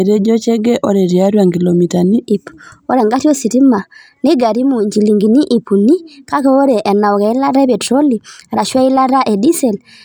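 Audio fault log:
2.25–10.05 s: section at the wrong speed. From 2.25 s on, the speech runs 1.15 times fast and about two semitones sharp, likely from playback against the wrong clock. A spectrogram shows harmonics and formants stepping up about 15%, and the waveform's syllables are compressed.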